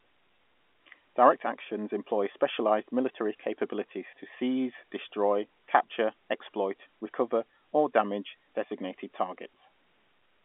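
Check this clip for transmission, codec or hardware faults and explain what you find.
Nothing here points to a transmission, codec or hardware fault: the speech comes through a normal G.711 telephone path, A-law at 64 kbps, so it sits in the usual 250 Hz to 3.4 kHz line band with nothing above about 3.7 kHz, and any coding trace is faint at most.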